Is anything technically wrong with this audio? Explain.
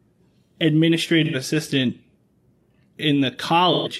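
Yes. Speech drops out in two places with AAC frame loss with concealment, at 1.24 to 1.35 s and 3.72 to 3.88 s. The decoder patches each gap from the last good spectrum, leaving a brief smeared, noisy, phasey stretch. The gaps suggest two lost frames and then three.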